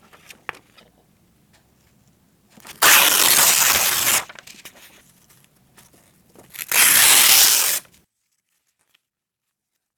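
Everyday sound recording with damaged data in a compressed stream at 0.76–0.81, 3.64–3.69, 7.41–7.46 and 9.83–9.85 s: corrupted frames cause brief chirps, squawks, clicks or short holes, seen as short broadband smears or waveform glitches.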